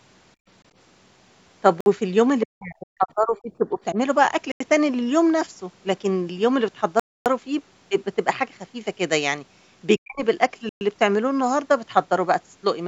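Background gated by the echo canceller, 0.36 to 0.47 s: while the far end's audio was playing through the loudspeaker, the canceller clamped the microphone down to stop it leaking back. The room tone behind the speech dips by as much as about 32 dB for roughly a tenth of a second, then returns once the canceller releases.

Bluetooth stall, 1.81 to 1.86 s: a 55 ms hole of dead silence, after which the speech resumes. The likely cause is radio interference delaying packets until the headphone buffer ran empty and playback waited for the resends.

Speech suppressed in double talk, 2.46 to 3.97 s: the talker's voice sinks by up to about 35 dB over roughly a second of this stretch. This is likely the echo canceller, faced with both sides speaking at once, failing to tell the talker from the loudspeaker echo and pulling everything down.

Bluetooth stall, 4.52 to 4.60 s: an 88 ms dropout to silence, likely from the headphone link starving for delayed packets before playback picks up again.

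Bluetooth stall, 7.00 to 7.26 s: the longest gap, 263 ms of silence, likely the same wireless buffer underrun lasting until retransmitted audio arrived.

Speech suppressed in double talk, 9.99 to 10.23 s: a brief, deep duck of up to about 40 dB over roughly 200 ms, likely the canceller again cutting the near talker while the other side was speaking.

Bluetooth stall, 10.69 to 10.81 s: a 118 ms silent cut, likely another interference-driven playback pause on the headphone link.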